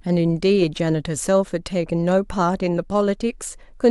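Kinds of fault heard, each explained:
Nothing in this recording stands out as a technical fault, so there's no kind to list here.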